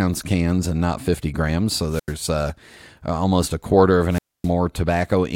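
At 1.89 s the speech gives way to a wireless microphone squelch dropout lasting until 2.14 s, and a second, longer one runs from 4.09 to 4.50 s. In each, the FM radio link weakens, hiss swells, and the receiver's squelch shuts the output for about 86 ms, then about 260 ms. That rising static before the hole of silence sets it apart from a digital packet-loss gap, which cuts cleanly without any noise build-up.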